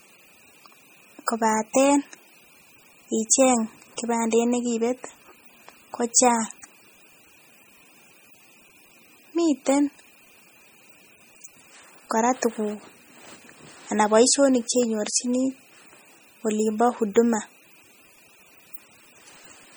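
Speech throughout, with heavy MP3 compression damage: the sound is watery and swirly, sibilants chirp metallically, and attacks smear. Content stops at about 20.6 kHz. It's likely a very low-bitrate encode, around 32 kbps, zeroing weak frequency lines frame to frame.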